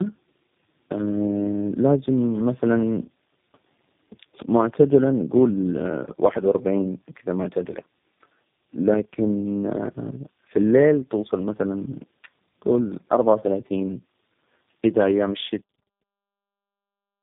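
Tandem speech coding runs throughout the clip: the call appears to have crossed two low-rate speech coders in a row, most likely an AMR-NB link and then a G.729A link, joined by an ordinary telephone-rate hop. Each coder re-encodes the previous one's already damaged output, so errors pile up. The speech sounds rough, muffled and warbly, with nothing above 3.8 kHz, and that coloring continues into the deliberate fade-out starting around 15.5 s and ending at 15.63 s.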